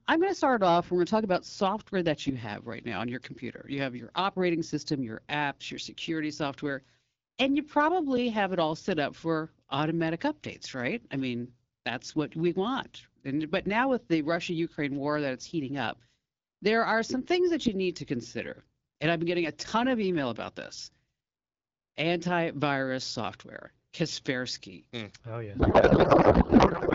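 A speech clip carried over AMR wideband (HD Voice), which at 12.65 kbit/s sounds pretty clear. Then at 25.59 s, right up to the end at 26.95 s, there's a codec payload misread. The speech collapses into garbled noise and warble that barely tracks what was being said. That fits the receiver unpacking the AMR bits in the wrong layout, probably octet-aligned frames being read as bandwidth-efficient ones, so every field lands in the wrong place.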